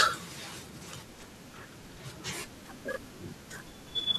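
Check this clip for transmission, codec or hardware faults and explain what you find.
One processor fault appears. From 2.94 to 3.28 s, processor overload crackle: about ten short buffers, around 10 ms each, miss their deadline and replay old audio, giving gritty tearing rather than a single clean dropout.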